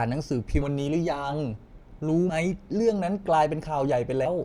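Compressed frames skipped at 0.61–0.64 s, 2.29–2.35 s and 4.25 s: whole blocks of the encoded speech never reach the output, so the audio lurches forward. The first two jumps each lose somewhere near 70 ms, which fits about four 20 ms frames going missing; the last drops roughly a fifth of a second.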